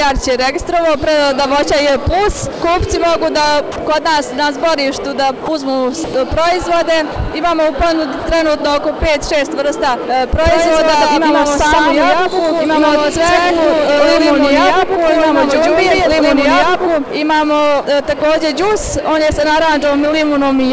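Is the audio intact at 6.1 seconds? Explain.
No. From 6.04 to 6.14 s, 100 ms of sound is replaced by steady, featureless comfort noise, most likely because the sender's voice detector misjudged it as background and stopped sending. Unlike a packet-loss gap, nothing is repeated or smeared, and the sound comes back when the detector triggers again.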